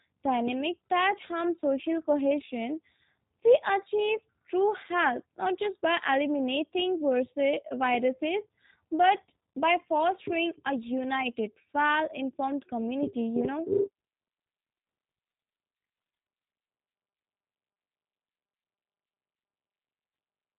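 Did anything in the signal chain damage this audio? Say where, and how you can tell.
Yes, the damage comes at the codec stage, and it runs through the whole speech clip: this is G.729 codec damage, plainly audible as a rough, slightly synthetic, buzzy quality, consistent with an 8 kbit/s G.729A-type coder. On a spectrogram the energy stops at a flat ceiling near 3.8 kHz, with nothing above it. The coder rebuilds each 10 ms frame from a vocal tract filter, a pitch predictor and a few pulses, discarding fine detail.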